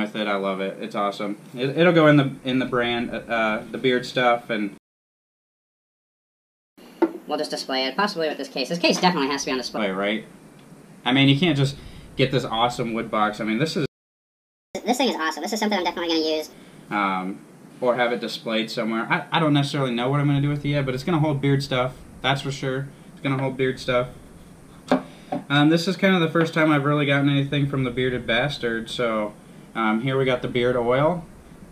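A player that likely ran out of data or was blocked left playback stalls from 4.78 to 6.78 s (2 s) and from 13.86 to 14.75 s (0.89 s), silencing the audio mid-flow. To recover lost time, catch-up at higher speed follows each gap: 1.25× with pitch up about four semitones until 9.78 s, then 1.5× and roughly seven semitones higher until 16.53 s.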